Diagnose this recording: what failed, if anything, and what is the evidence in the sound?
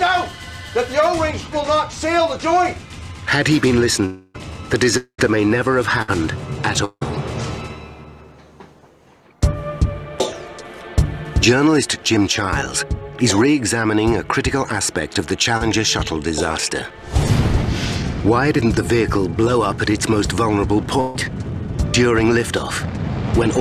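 At 4.05 to 4.39 s, 4.97 to 5.20 s and 6.85 to 7.03 s the audio stops progressing and the last sound is drawn out as a fading buzz or hiss. In the second and third gaps this decays into near-silence for about 90 ms and 60 ms. The sound then resumes further on, with roughly 280, 220 and 160 ms missing. This is likely a long network dropout, with the receiver extending the last audio until packets arrived again.

A burst of packet loss, also at the network stage, appears at 6.02 to 6.10 s and 21.00 to 21.16 s. Each gap is bridged by a held continuation of the preceding sound that sinks in level as it goes on, lasting 57 ms in the first gap and 140 ms in the second. The audio then picks up further along, about 60 ms and 140 ms later, so that stretch is simply gone.

Short concealed packet loss at 15.57 to 15.62 s sounds like a brief smear or wobble. About 40 ms of audio failed to reach the decoder in time. 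The receiver patched the hole with 33 ms synthesized from the preceding sound, continuing its pitch if voiced or shaping noise if not, then crossfaded back into the real signal.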